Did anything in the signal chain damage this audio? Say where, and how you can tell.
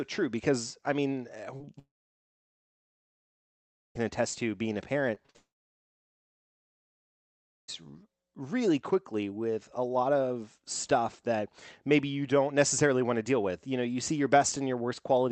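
Yes. Short concealed packet loss at 1.57–1.62, 1.66–1.69, 5.15–5.18, 5.26–5.30 and 5.30–5.36 s is a network-stage fault. Each is a brief smear where 20 to 40 ms never arrived and the decoder extended the preceding sound across the gap.

Long network dropouts run from 1.79 to 3.97 s (after "because I mean uh", resuming at "attest to being a") and from 5.36 to 7.70 s. The concealment fades quickly into over two seconds of silence, likely from lost packets. The missing audio is skipped, not delayed.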